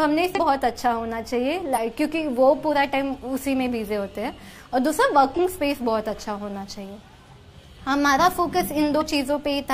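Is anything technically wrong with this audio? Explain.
Yes, there is damaged data in a compressed stream, with four short bursts at 0.33–0.39, 1.72–1.78, 5.34–5.40 and 8.97–9.03 s. Corrupted frames lose decoder sync, producing roughly 60 ms chirps or squawks that appear as broadband smears on a spectrogram and jagged discontinuities in the waveform.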